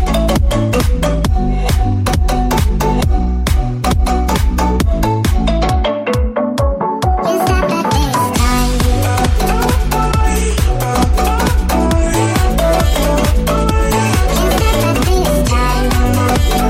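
No technical faults can be heard anywhere in the audio. Nothing in it points to a problem with how it was captured, carried or played back.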